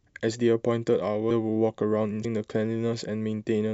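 At 1.30 s and again at 2.24 s, compressed frames are skipped. Stretches of coded audio never reach the output, so the speech jumps forward by roughly 0.4 s at the first point and about 0.3 s at the second. Those jumps fit whole frames of about 26 ms each. Because adjacent frames overlap, each join is a short smeared blip rather than a sharp click. On a spectrogram, the harmonic and formant tracks break off and resume at unrelated positions, joined by a soft-edged smudge. The waveform shows a sudden change in envelope with no spike.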